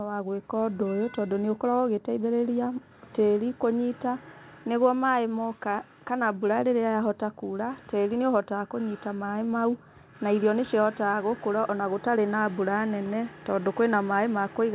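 Listening to this speech clip, nothing stood out, with the call path behaving as expected and its narrow band topping out around 4 kHz, which fits a G.711 A-law link at 64 kbps.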